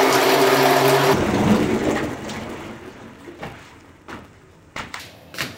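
From 1.14 s to 5.0 s, interleaved audio is read as planar: alternating left-right samples are split into half-block channels. Blocks of about 5.33 ms, fitting a 256-sample buffer, make the sound dull and robotic, buzzing near 188 Hz. Spectrograms show stripes spaced 188 Hz apart.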